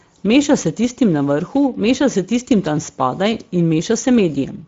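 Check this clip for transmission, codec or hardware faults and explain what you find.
There's one fault, and it runs the whole way through: the speech has gone through the Speex codec, and the damage is plainly audible. Speex models the voice with a small excitation budget, and at a rate that sounds like roughly 17 kbps that budget runs thin. You get a grainy, hoarse edge on the speech. Nothing comes through above about 7.7 kHz, and the top band that is there sounds more like shaped noise than real detail.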